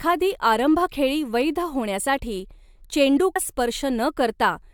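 Speech that jumps abruptly forward at 3.35 s, with a brief blip where the sound cuts and resumes further along. This is likely a stream segment skipped: one chunk of the segmented stream failed to load, and playback carried on from the next, dropping that stretch of audio.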